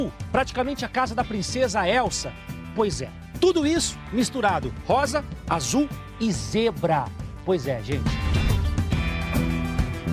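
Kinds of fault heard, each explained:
No technical faults can be heard anywhere in this audio. Nothing in it calls for a fault-by-fault explanation.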